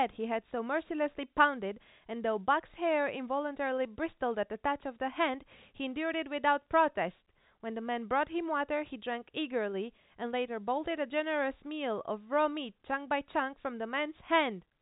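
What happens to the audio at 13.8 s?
Nothing goes wrong at 13.8 s: the speech carries on intact, with only the normal telephone-band limit of G.711 coding, nothing above about 3.8 kHz, and no fault at that point.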